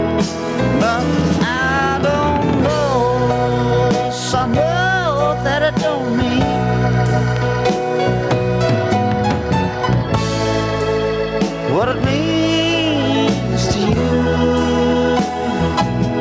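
Gain pumping runs through the whole clip: the gain swings by around 10 dB and is pulled down on each loud sound, likely because the input gain is set far too high and a fast limiter keeps pulling it down. Unlike steady background noise, the level rises and falls with the sound. Call microphone processing limits the band to 8 kHz.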